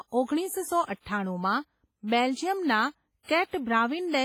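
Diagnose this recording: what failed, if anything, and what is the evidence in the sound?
The failure sits at the codec stage. Across the whole speech clip there is ringing, a washy smear, and hiss that breathes with the signal. That is likely WMA compression, with heavy damage that fits a low bitrate around 24 kbps. Long transform blocks spread quantisation noise over tens of milliseconds, and weak spectral lines are dropped.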